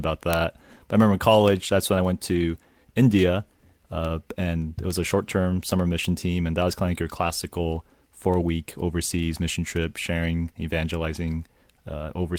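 A speech recording carries word clock ticks from 0.33 s to the end, arriving at a steady pace of roughly one every 0.3 s. That regularity points to a receiving device free-running against its digital source, with a clock error around 70 ppm, and sets them apart from random clicks. There are also two losses rebuilt from error correction, at 2.35 to 2.37 s (20 ms) and at 5.55 to 5.61 s (40 ms, consistent with two packets). Each sounds briefly rougher and noisier but leaves no gap, unlike a dropout or concealed silence.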